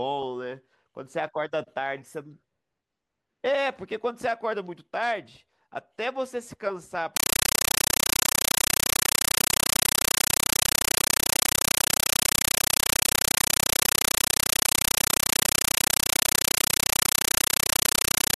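Speech that, from 7.17 s to the end, becomes a compressed stream played as audio: loud static gated into 8 ms bursts 31.25 times a second, a rhythm unlike steady noise and pointing to undecoded AC-3.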